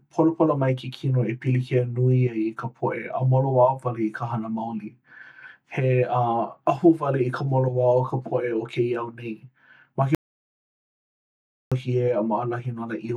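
At 10.15 s the speech cuts to dead silence until 11.72 s, losing about 1.57 s: an audio dropout to silence, likely from the input briefly disconnecting or muting.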